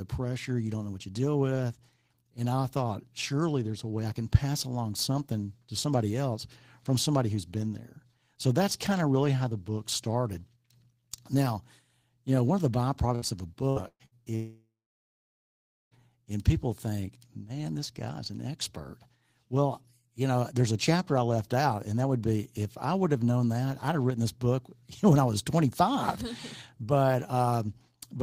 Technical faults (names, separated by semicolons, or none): burst of packet loss; long network dropout